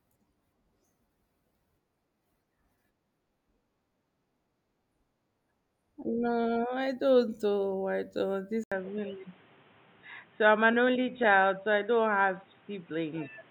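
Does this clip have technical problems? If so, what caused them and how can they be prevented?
Yes. At 8.64 s the recording most likely switched its input to a poorer device. The new path cuts everything above 3.8 kHz, so from that point to the end the speech turns dull and boxy. An 80 ms gap marks the switch, and a fresh background hiss appears, sitting roughly 30 dB under the speech. Loudness stays about the same, so the change is one of tone and noise rather than level. To prevent this, lock the input to the intended microphone and disable automatic device switching or headset call profiles before recording.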